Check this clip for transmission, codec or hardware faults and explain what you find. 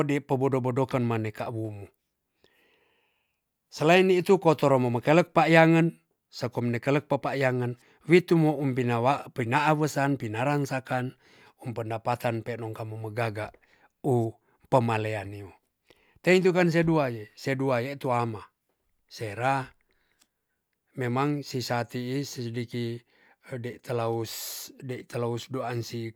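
Nothing here needs flagging; the speech just rolls along without anything going wrong that I can pick out.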